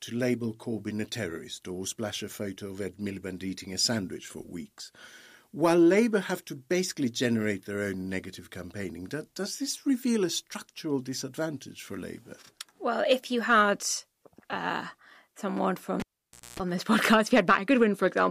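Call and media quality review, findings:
Cable pulled and plugged in, 16.00–16.60 s. Pop, 0.55 s dropout, 0.24 s of 60 Hz mains buzz as the tip reconnects, second pop before "on this". Suspect input cable pulled out and plugged back in.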